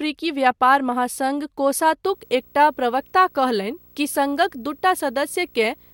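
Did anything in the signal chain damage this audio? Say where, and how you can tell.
Yes. In the analogue wiring, a screen or video cable is coupling into the audio, producing video or display buzz from 2.04 s to the end. It is a 59.94 Hz field-rate buzz with hash above it and a 15.7 kHz line-rate whine, roughly 30 dB below the speech.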